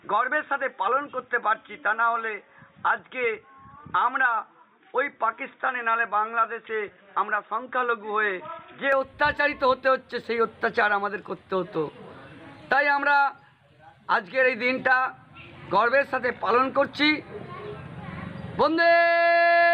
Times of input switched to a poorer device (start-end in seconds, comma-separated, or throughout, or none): 0.00-8.92